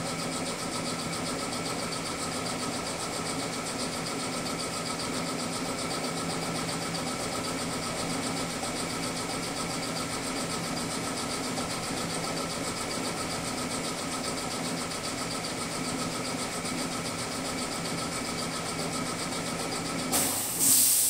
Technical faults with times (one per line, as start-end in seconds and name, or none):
5.09-5.11 skip ahead
5.25-7.80 jitter buffer speed-up